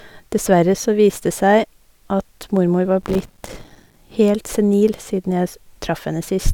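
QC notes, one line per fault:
3.01 to 3.97 s, processor overload crackle: for almost a second the speech is torn by a dense, gritty crackle that stops as abruptly as it starts. The processor repeatedly missed its deadlines for tiny buffers of a few milliseconds, perhaps a hundred times over that stretch. Each miss left a short silent hole with hard edges. Unlike a single dropout or a network gap, the holes are too short and too many to hear one by one, so they fuse into continuous roughness over the speech.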